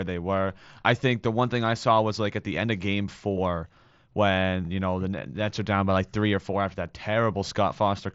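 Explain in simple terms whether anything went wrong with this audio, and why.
Nothing went wrong here.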